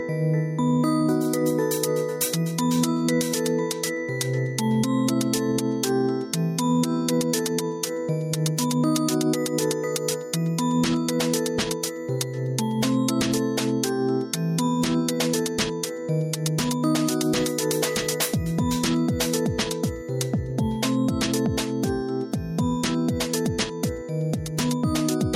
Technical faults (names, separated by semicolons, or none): gain pumping